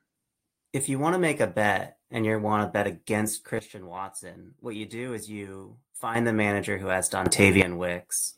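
At 3.59 s, after "want to bet against", a sudden gain jump drops the speech and background noise together by about 10 dB. The level returns at 6.15 s, before "the manager who has". At 7.26 s, after "the manager who has", the level leaps about 13 dB until 7.62 s. The likely cause is a gain setting applied instantly, without a ramp.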